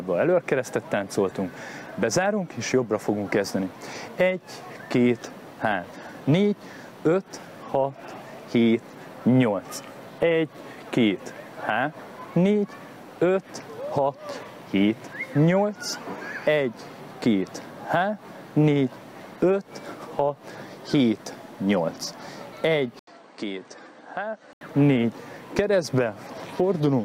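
From 22.99 to 24.61 s, after a brief 80 ms gap, the sound turns dull and boxy, with nothing above 9 kHz, drops roughly 10 dB, and carries a faint new noise floor. The likely cause is the input switching to a poorer device.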